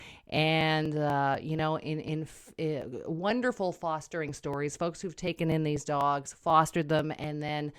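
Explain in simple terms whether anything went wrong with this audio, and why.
Yes, something went wrong. From 0.12 s to 7.73 s the speech carries a steady ticking, about four small clicks every second, spaced 0.246 s apart, roughly thirty in all. These are periodic USB or driver dropouts: something on the computer kept interrupting the audio connection on a fixed schedule, and each time a sliver of sound, around 4 ms, was simply skipped. The gap joins the sound on either side abruptly, which is what you hear as a tick.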